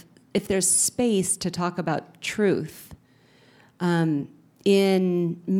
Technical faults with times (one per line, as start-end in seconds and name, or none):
0.38-4.58 clock drift buffer slips